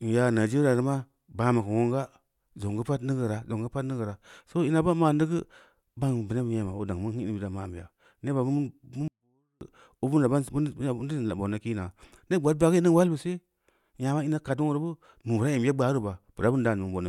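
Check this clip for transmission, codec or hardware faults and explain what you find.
One fault is present: a 24-bit alignment error making the speech too quiet, from 9.08 to 9.61 s. Samples packed in the low 24 bits of 32-bit words were read as full 32-bit values. The level drops by about 48 dB at once. The speech stays clean but almost vanishes.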